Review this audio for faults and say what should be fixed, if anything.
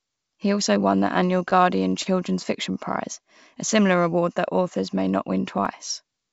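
Repeated stalls (stutter) run from 1.38 to 2.07 s, just after "also won the". Six times the jitter buffer emptied and the receiver stretched the last sound, 75 ms in all, the longest gap 29 ms, about 11% of that stretch. Nothing is lost, but the speech drags and stutters. On a spectrogram these gaps show as short smeared, repeated frames breaking the harmonic tracks, and the waveform shows brief copied or fading segments. To prevent this, give the jitter buffer more headroom or fix the late, slow packet delivery upstream.

CD scratch ticks appear between 5.07 and 5.66 s, after "award that authors may". The disc surface had damage beyond the error correction's reach, and the player interpolated or muted the bad samples, leaving three ticks, each lasting only a few milliseconds. A spectrogram shows thin vertical broadband lines, and the waveform shows tiny spikes or flattened notches. These could be avoided by cleaning or resurfacing the disc, or re-ripping it with a secure, retrying ripper. 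The call path itself, coded with G.722 and carrying nothing above 8 kHz, is the expected bandwidth limit rather than a fault.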